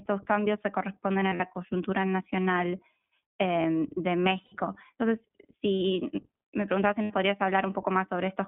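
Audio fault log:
Throughout, iLBC codec: the speech is squeezed into a telephone band of roughly 150 Hz to 3.5 kHz, so there's nothing up top and a thin low end. Each 20 ms frame gets its excitation coded on its own at about 15.2 kbps, and the damage is plainly audible as a slightly rough, synthetic edge on the voice. That's the price of a frame-independent narrowband coder running at this rate.
1.20 to 1.42 s, 4.46 to 4.54 s, 7.02 to 7.12 s, lost iLBC frames: three dropouts where the decoder had no packets and papered over them by repeating the last pitch cycle with some noise mixed in. That's why each gap sounds like a held, faintly buzzy vowel rather than silence. The first one is patchy, 100 ms missing across about 200 ms with the longest run only around 40 ms; the others lose 60 ms and 80 ms. Since iLBC frames stand alone, the voice snaps back almost immediately after each.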